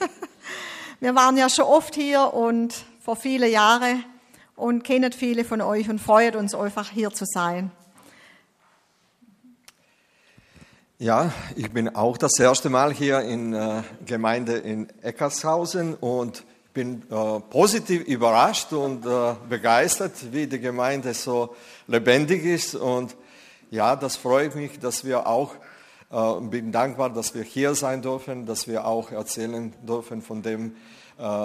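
From 15.78 s to the end at 31.45 s, a gritty, inharmonic fizz rides on top of the sound, rising with loud and bright passages and carrying tones that belong to nothing in the material, roughly 25 dB below the signal. This is crude rate conversion: samples were simply repeated or dropped to change the rate, with no filtering, in a pattern that fits a 44.1 kHz to 48 kHz conversion, so the stepping error repeats and sounds as spurious tones.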